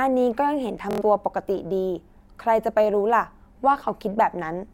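At 0.91 s the speech breaks into a Bluetooth stutter that runs until 1.02 s. Packets failed to arrive in time, so the receiver kept replaying its last short buffer. About 93 ms of audio is lost, which points to roughly four missing packets, heard as a brief buzzy machine-gun repeat before the speech jumps ahead. On a waveform, one short slice repeats identically. A spectrogram shows evenly spaced vertical striations, then a hard seam where new audio resumes.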